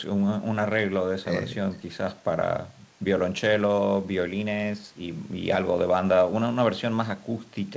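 No technical faults can be heard in the speech.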